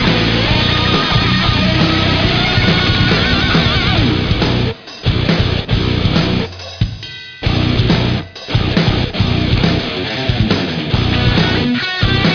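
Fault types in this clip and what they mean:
No faults are audible anywhere in this clip.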